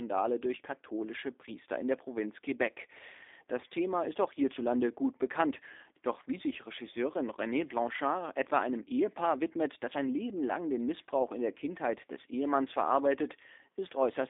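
G.729 codec damage runs throughout this speech, plainly audible as a rough, synthetic edge. The sound fits an 8 kbit/s G.729A stream that rebuilds each 10 ms frame from a vocal tract filter and sparse pulses. Content sits within roughly 300 Hz to 3.6 kHz, with nothing above 3.7 kHz.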